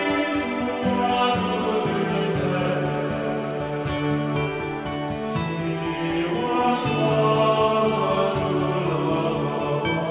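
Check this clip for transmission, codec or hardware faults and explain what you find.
No faults are audible in this clip.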